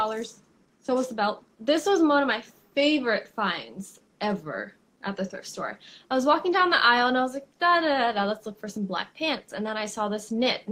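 No technical faults are audible.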